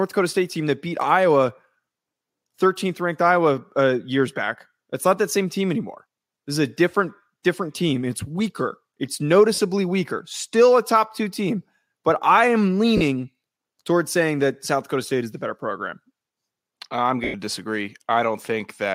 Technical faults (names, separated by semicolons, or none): lost LE Audio frames